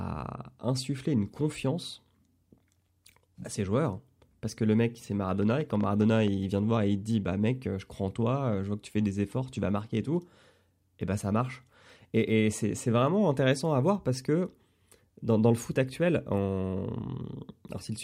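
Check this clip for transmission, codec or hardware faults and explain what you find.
One fault turns up, a train of clicks. From 5.43 to 6.29 s, likely interference or a faulty connection injects about ten pulses at an uneven 9.4 per second, popping roughly 5 dB above the speech just before "vient de voir et".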